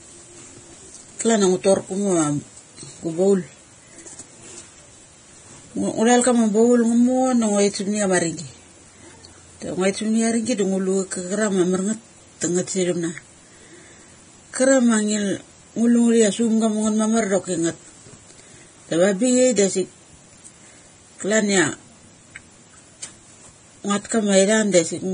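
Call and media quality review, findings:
Hissy, grainy speech for the full clip; nothing above 9.7 kHz. Likely Vorbis compression, heavily damaged: treble quantised so coarsely that detail turns to noise, roughened tones, smeared attacks. Consistent with a low bitrate near 23 kbps.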